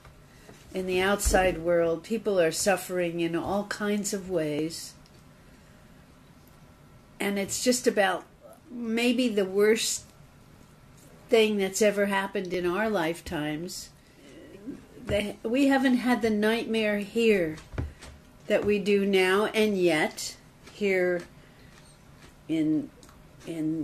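At 4.59, 8.56, 10.56, 12.54 and 14.53 s, an overlap between stream segments trims several milliseconds from each 2 s segment boundary. This is audio that was never actually duplicated, so the waveform jumps and each join gives a brief click or skip.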